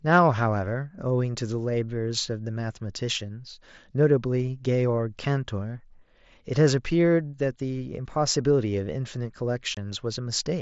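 At 9.75 s, lasting until 9.77 s, the speech drops out in an unconcealed Bluetooth headset packet loss. A gap of about 22 ms, which fits three lost 7.5 ms headset frames, was filled with silence or an idle pattern rather than patched over, so there is a brief hole with hard edges that can click. The waveform shows a flat gap with abrupt cuts on either side, and a spectrogram shows a thin blank vertical strip across the mSBC band up to 8 kHz.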